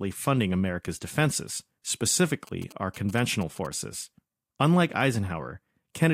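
Speech, with a burst of GSM signalling interference from 2.47 to 3.67 s. Across that stretch a galloping dit-dit-dit pattern of short buzzes at a repetition rate of about 217 Hz cuts into the audio, some way below the speech level. A 2G phone close by is exchanging brief groups of radio bursts with the network, and the audio circuit rectifies that RF energy into an audible pulse train.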